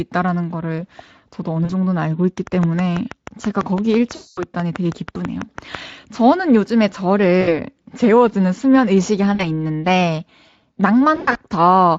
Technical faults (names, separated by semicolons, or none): VoIP packet loss concealed by the speech codec; train of clicks